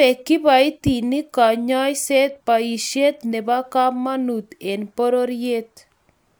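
No technical faults can be heard anywhere in the recording.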